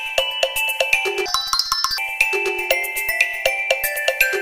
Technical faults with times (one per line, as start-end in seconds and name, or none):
1.26-1.98 audio read two samples at a time (double speed)